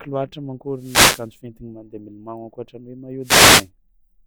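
Wireless microphone noise hits at 0.73–1.32 s and 3.21–3.69 s in this speech recording: bursts of static swish in as the FM radio link fades and receiver noise rises over the voice.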